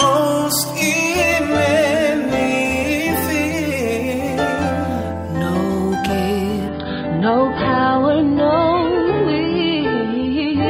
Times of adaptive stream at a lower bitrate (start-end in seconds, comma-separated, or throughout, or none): 6.68-10.69